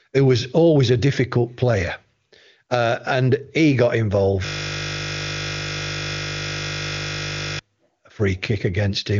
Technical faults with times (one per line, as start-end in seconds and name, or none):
4.46-7.59 system hang loop